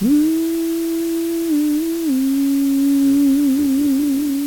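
Low bit depth with dither runs from start to finish. The sound is stored with only 5 bits per sample, and a small random signal was added before each value was rounded to those few levels. That randomisation turns what would be gritty quantisation distortion into steady white noise. It sits roughly 15 dB below the signal, so the whole clip carries a constant, even hiss with no distortion of the sound itself.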